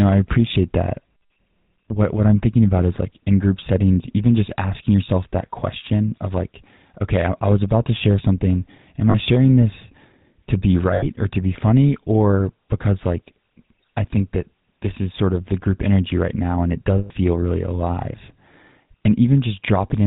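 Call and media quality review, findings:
GSM full-rate codec, whole clip. Buzzy, gravelly speech, nothing above 4 kHz, plainly audible. Pulse-train excitation through a vocal-tract model, consistent with 13 kbps full rate. Unlike wideband-codec smearing, the grit is fixed and periodic, not a watery blur.

Lost GSM frames at 9.1–9.15 s before "sharing this to be", 10.94–11.04 s between "sharing this to be" and "or to be funny", and 16.98–17.11 s between "right now and it" and "really alive". Metallic ring while the last good frame repeats.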